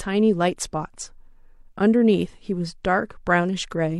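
Nothing stood out as a technical problem anywhere in the speech on listening.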